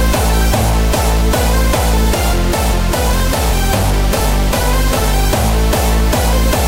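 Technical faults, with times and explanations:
0.20–6.20 s: periodic USB or driver dropouts. About seven short gaps, spaced 1.0 s apart, each skipping around a millisecond of audio outright. A recurring stall on the bus or in the driver causes the lost samples, heard as evenly timed ticks over the signal.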